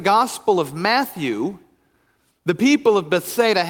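No technical faults are audible.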